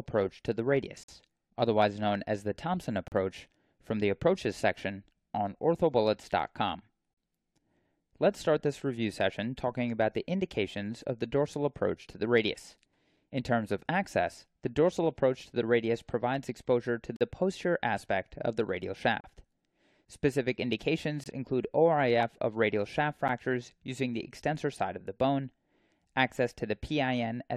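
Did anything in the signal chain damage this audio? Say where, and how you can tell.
Yes. Gaps between stream segments in playback: hard-edged silences at 1.03–1.08, 3.08–3.12, 17.16–17.21, 19.20–19.24, 21.24–21.26 and 23.28 s, 9 to 50 ms long, on a 2 s segment grid. Unlike a dropout, no speech is lost. It simply resumes late.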